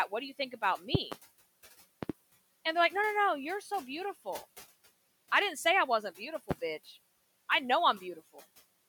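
A loud pop lands at 0.95 to 1.15 s, right after "do you think about". It is two sharp pops in quick succession, about 20 dB above the speech. Another double pop follows at 2.03 to 2.12 s. A single pop comes at 6.51 to 6.54 s, after "didn't say I wasn't". The likely cause is a voltage pulse from a plug, switch, static or driver glitch. The speech carries on underneath each one.

At 3.61 to 3.71 s, the noise suppressor cuts speech. It mistakes about 100 ms of it for noise and turns it down by up to about 6 dB. It sounds swallowed.

The room noise sits about 23 dB below the speech.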